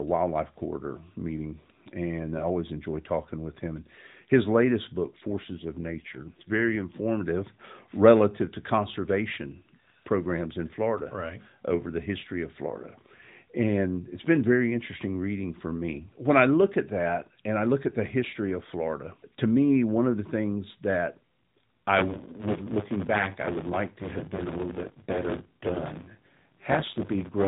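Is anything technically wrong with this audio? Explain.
Yes, there are two faults in this speech clip, which is carried over an AMR narrowband mobile codec throughout.

Just after "his latest book", from 5.28 s to 6.85 s, there is an AMR rate drop. The audio band stays the same and there is no gap, but the voice turns rougher and more synthetic. This fits the network commanding a fall from about 12.2 kbps to about 5.9 kbps to free bits for error protection. Fewer pulses per subframe leave the vocal-tract model coarsely excited until the rate returns.

From 21.98 s to the end at about 27.5 s, buffer tearing produces a steady robotic buzz at 100 Hz that is present only while there is signal. The writing process and the playback hardware have drifted so their positions cross inside each buffer period. Roughly a fifth of every buffer replays audio from about 20 ms earlier, with a hard splice at both edges. 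Those splices repeating every 10 ms create the buzz.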